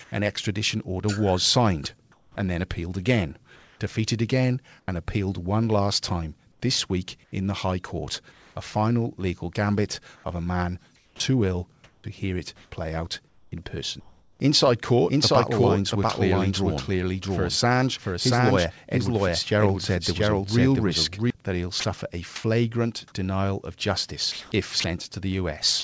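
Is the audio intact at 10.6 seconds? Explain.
No. From 10.16 to 14.40 s the speech has holes totalling 1.32 s, filled with comfort noise. This is likely sound chopped by the voice detector switching transmission off and on.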